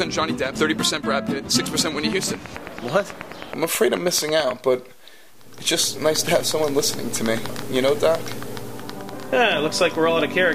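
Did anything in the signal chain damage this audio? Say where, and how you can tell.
Yes. A train of clicks runs from 2.13 to 4.52 s. Around twenty near-identical pulses tick at a steady 9.2 per second, peaking roughly 10 dB above the sound. That even, repeating pulse is likely interference coupling into the analogue wiring or interface.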